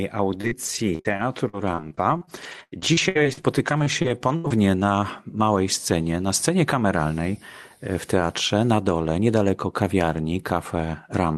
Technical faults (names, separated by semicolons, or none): repeated packet loss (robotic sound)